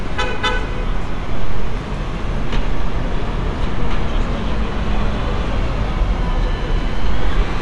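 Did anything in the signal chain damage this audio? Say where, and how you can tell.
Yes, at the codec. Throughout, nothing reaches above 11.4 kHz, and a rough, fluttering noise sits in the sound. This fits likely Dolby Digital compression near 64 kbps, with starved bands filled by noise.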